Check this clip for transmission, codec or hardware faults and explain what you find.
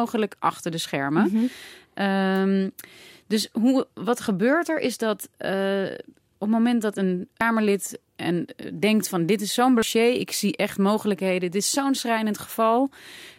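Two brief faults show up in this speech clip, both damaged data in a compressed stream. At 7.41 s, after "het moment dat een", and at 9.82 s, after "van dit is zo'n" and before "ik zie echt mogelijkheden", a short chirp or blip cuts in. Corrupted bytes make the decoder misread a frame, lose sync and hunt for the next valid header.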